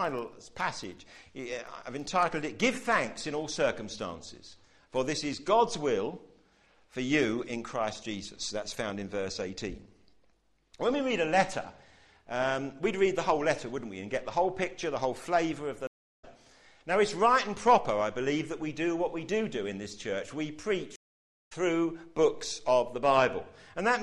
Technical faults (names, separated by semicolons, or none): filter restarted on every block; stream reconnect